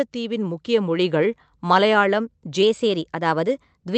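From 0.13 s to 1.28 s the level climbs steadily by about 5 dB, a case of automatic gain rising. The gain control judged the incoming speech too quiet and raised its amplification over roughly a second. The background rises at the same rate as the speech, because the stage scales the whole signal and cannot separate them. The result is a slow swell, with no jump at any single point.

At 2.63 s the playback speed jumps by 6.24% and stays there until the end of the clip. Pitch rises with it by 105 cents, a little over a semitone, so the speech sounds both quicker and detuned upward from that moment on. A single-step change in rate like this is most likely a drift correction step, in which clock-matching software abruptly changes the rate to refill or drain its buffer.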